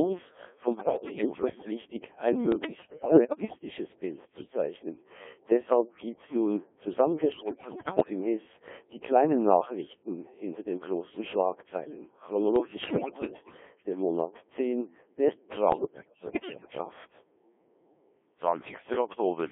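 Speech runs through a Codec 2 vocoder at 1.3 kbit/s, confined to roughly 250 Hz to 3.5 kHz. Only pitch, voicing, level and a spectral envelope survive. The decoder rebuilds the voice from sine waves, so it sounds heavily robotic and buzzy. Bit errors on digital voice radio break in five times: 0.73–1.71 s, 2.52–3.58 s, 7.32–8.10 s, 12.56–13.62 s and 15.72–16.78 s. Flipped bits corrupt whole frames, so pitch, level and tone colour jump into warbles and gibberish. About one bit in ten is wrong, about 15% in the 7.32 s burst and nearer one in five in the last burst.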